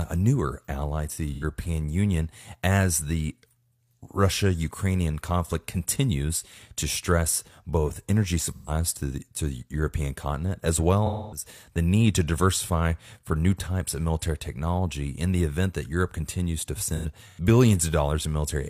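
AAC frame loss with concealment at 1.33, 8.48, 11.06 and 16.88 s: the decoder patches lost audio (85, 128, 256 ms) from the last good spectrum, giving smeared, phasey gaps. The last event is scattered over about 0.43 s, with the longest run about a tenth of a second.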